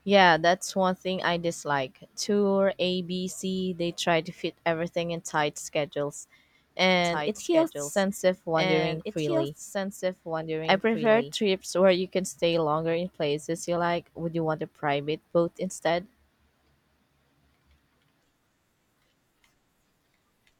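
Speech, with a doubled audio track from 7.04 to 11.32 s. A full-band copy of the speech runs about two seconds behind the original, roughly 5 dB quieter. It has no decay or room colour. It starts and stops abruptly, starting just before "where you can stay". The likely cause is a second capture path or an edit holding two out-of-step copies.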